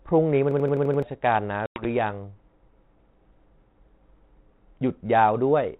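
From 0.51 to 1.02 s the speech sticks in a system hang loop. One 85 ms slice repeats six times at 11.7 Hz. That loop length fits a 4096-sample ring buffer. The computer or driver stalled, but the sound hardware kept replaying the same buffer. It sounds like a machine-gun stutter. About half a second of real audio is missing when the stall ends.

From 1.66 to 1.85 s there is packet loss on an ADPCM call. It opens with a 100 ms hole, sharp-edged and silent. That points to roughly ten lost packets. The call is carried as G.726 at 32 kbit/s, a DECT-style rate. With the packets gone, the receiving decoder's adaptive prediction and step size drifted from the sender's. The speech returns slightly distorted before it settles.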